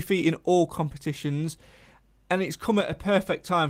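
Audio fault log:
0.63–0.65 s, lost packet rebuilt from error correction: for 20 ms the sound turns rougher and grainier, yet nothing drops out. This fits a single lost packet whose content the decoder replayed from the lower-bitrate copy carried in the following packet. On a spectrogram, a narrow vertical slice shows smeared, noisier texture. The waveform stays continuous, with no flat gap.
2.81–2.92 s, one channel drops out: just after "and it's", the level falls abruptly by about 6 dB for roughly 0.11 s, then snaps back. The likely cause is one stereo channel going silent, so the mono sum keeps only half of the shared content, and anything unique to that channel vanishes. The waveform shows a sudden step down in envelope with sharp edges. The spectrogram shows a uniformly dimmer band across all frequencies for that stretch.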